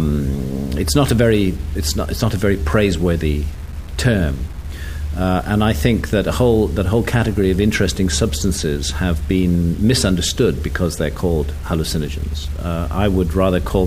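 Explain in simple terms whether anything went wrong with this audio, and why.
Yes, something went wrong, and it lasts the whole clip. A grainy, gritty roughness clings to the sound, worst in the quiet moments, where the faintest parts sputter or drop out to silence. The likely cause is low bit depth without dither: the audio was stored with too few steps of loudness, roughly 7 bits' worth, and simply cut down to them. Unlike steady background hiss, this grit rises and falls with the sound and vanishes completely in silence.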